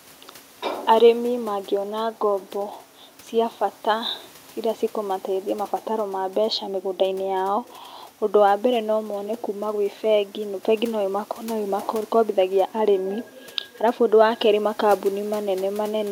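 No technical faults are present.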